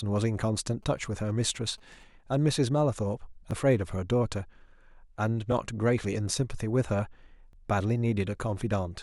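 GSM signalling bursts run from 0.83 to 2.03 s in this speech recording. A nearby 2G phone is only signalling, not carrying a call, so it sends brief clusters of radio bursts. Some part of the audio circuit rectifies them, and they come out as a galloping dit-dit-dit of short buzzes at a 217 Hz repetition rate, roughly 30 dB below the speech. Overlapping chunks cause a click or stutter at 1.50, 3.51, 5.52 and 7.53 s. The audio was handled in 2.0 s blocks, and each block begins 12 ms before the previous one finished. That 12 ms sliver therefore plays twice at every join, producing a tiny repeat on a strict two-second cycle.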